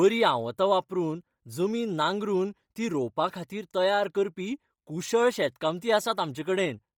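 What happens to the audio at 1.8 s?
At 1.8 s the speech has a heavy, breathy graininess throughout the clip, likely Bluetooth LC3 compression, whose noise-filled upper spectrum sounds hissy rather than muffled by a bandwidth cut.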